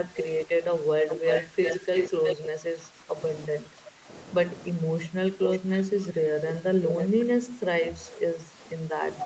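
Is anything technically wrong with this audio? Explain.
Yes. Two kinds of fault can be heard.

Speech suppressed in double talk occurs from 0.08 to 3.16 s, from 3.6 to 4.08 s, and from 7.13 s to the end. The level dips by up to about 10 dB, for around two seconds of the first stretch. The likely cause is an echo canceller that could not separate the near talker from loudspeaker echo, so it turned both down.

An echo leak is heard from 1.1 to 2.36 s as a copy delayed by 353 ms, about as loud as the original. Shorter leaks follow at 5.42 to 6.06 s, 6.48 to 6.54 s and 6.88 to 7.07 s. These are delayed by 513 ms and sit about 5 to 10 dB lower. Loudspeaker sound was likely picked up and only partly cancelled before being sent back.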